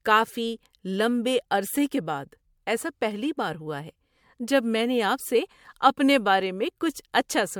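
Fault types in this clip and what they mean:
Generation loss: speech sounds swirly, smeared and hollow, likely from about four MP3 re-encodes; spectrogram shows accumulated holes, blurred onsets, nothing above 20 kHz.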